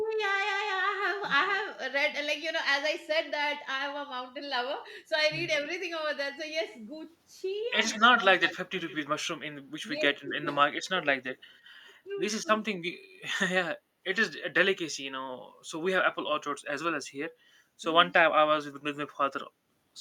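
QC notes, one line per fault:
1.46–1.57 s and 7.89–8.95 s, echo leak: a delayed copy of the speech returns 147 ms behind the original. The first is a brief scrap far down in level, roughly 40 dB below the speech. The second runs about a second and sits only about 10 dB under. The likely cause is a loudspeaker on the far end whose echo canceller let its own pickup through. A fixed, discrete delay separates this from room reverberation, which smears continuously rather than repeating.
10.2–11.28 s and 12.05–12.79 s, speech suppressed in double talk: the talker's own voice drops sharply in pieces, down by roughly 35 dB in the first stretch and 30 dB in the second. About 400 ms and 200 ms are lost in total. This is likely the echo canceller failing to tell the talker from loudspeaker echo while both sides spoke, and turning both down. Unlike gating, the speech itself is cut, not just the room.
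13.85–13.98 s, background gated by the echo canceller: the room sound behind the speech dips by about 6 dB for roughly 100 ms, then comes back. The canceller clamped the microphone while the loudspeaker played and released it afterwards. The drop is shallow and brief and affects only the ambience. That sets it apart from double-talk suppression, where the talker's voice is carved out far more deeply.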